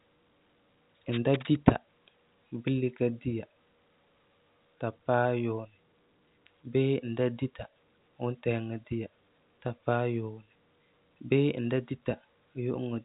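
The speech carries no audible technical faults.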